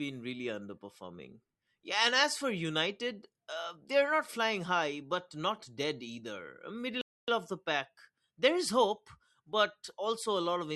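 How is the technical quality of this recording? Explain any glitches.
One glitch: a rebuffering stall from 7.01 to 7.28 s, right after "but not dead either". The player ran dry and paused, adding about 0.27 s of silence before "of the pack" resumes. Unlike a dropout, no speech is lost.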